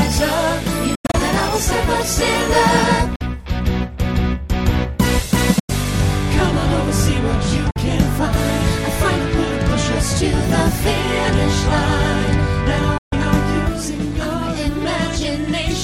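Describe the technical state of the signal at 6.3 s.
At 6.3 s the signal is intact, with no dropout, clipping, glitch or other fault audible at that moment.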